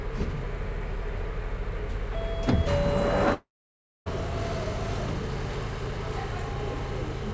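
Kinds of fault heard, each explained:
Long network dropout: From 3.34 to 4.08 s the sound breaks off, likely because packets stopped arriving. The receiver stretches the last sound into a short fading buzz, leaving about 0.59 s of near silence before the audio resumes with that stretch gone. On a waveform the envelope shrinks to a flat line. On a spectrogram a smeared band fades into an empty gap, all below the 8 kHz ceiling of the G.722 path.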